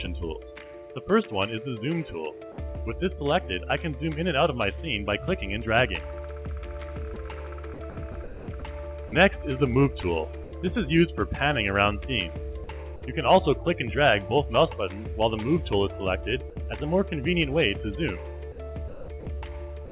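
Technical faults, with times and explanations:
7.14–7.16 s, 10.44–10.52 s and 16.50–16.56 s: sound dropped by the voice detector. Brief gaps of about 20, 80 and 60 ms where the audio gives way to steady noise or near silence. The sender's voice detector likely judged these moments as background and stopped sending, so the receiver filled them with comfort noise.
7.74–9.12 s, 12.64–13.02 s and 18.52–19.91 s: sound chopped by the voice detector. The sound turns choppy, with two or more holes in each stretch. About 440, 100 and 414 ms were replaced in total. The voice detector likely toggled repeatedly, swapping quiet stretches for comfort noise, heard within the call path's band-limited sound, which has nothing above 4 kHz.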